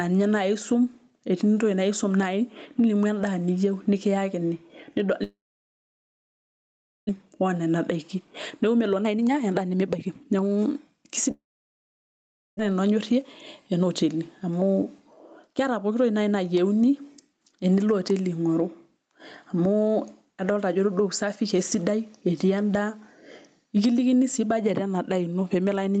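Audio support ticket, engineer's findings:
Gain pumping, throughout. Level swing about 15 dB. Likely cause: mic gain set far too high, with a fast limiter/compressor clamping it on every peak. Dynamics squashed, loud and soft speech pulled close in level. Check input gain staging before the limiter.

Long network dropout, 5.23–7.11 s. Last sound continued as a fading buzz, then near-silence for about 1.7 s; roughly a second of speech never played. Likely cause: packet loss/stall on the network path; receiver concealment ran out and delay grew by about a second. Long network dropout, 11.31–12.61 s. Same signature: brief fading fill, about 1.2 s of silence, about a second of speech lost; delay grew by about 0.3 s.

Jitter buffer speed-up, 7.19–11.29 s at 119%, about 0.7 s trimmed; 12.69–13.24 s at 109%; 13.73–14.82 s at 116%, about 0.2 s trimmed; 15.43–16.01 s at 109%. Speech hurried, pitch unchanged. 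Jitter buffer overfilled after the dropouts as late packets arrived together, and cut repeated pitch-period-sized pieces to bring the delay back down. The Opus call path's 8 kHz top end is normal for this link.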